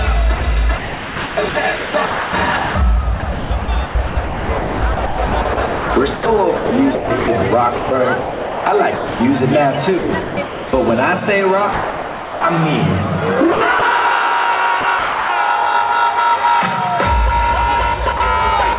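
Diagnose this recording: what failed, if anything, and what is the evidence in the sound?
Call processing: sound chopped by the voice detector at 0.38–9.2, 9.98–10.73, 13.52–13.82 and 14.81–15.29 s, with holes where the sound is replaced by comfort noise, likely from the sender's detector gating repeatedly.

Call processing: sound dropped by the voice detector at 11.72–12.44 and 18.17–18.20 s, where the sound gives way to comfort noise, likely after the detector mistook it for background. Nothing is heard above 4 kHz on the call path.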